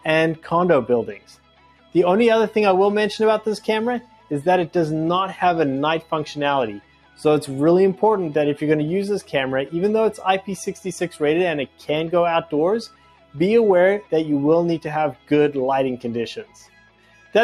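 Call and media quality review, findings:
Noise suppressor applied to music or sounds, throughout: the level pumps and flutters with a gain swing of around 10 dB. Attacks pass while held tones and tails sink. A speech-tuned suppressor is classing steady content as noise. The waveform envelope breathes, and the spectrogram shows sustained partials fading patchily.

Sound cut by the noise suppressor at 1.19–1.95, 4.02–4.31, 6.8–7.2, 11.67–11.88, 12.88–13.35, 15.14–15.31 and 16.43–17.34 s: steady or decaying sound drops about 10–12 dB while transients survive. The waveform shows clipped-short tails, and the spectrogram shows darkened bands after onsets.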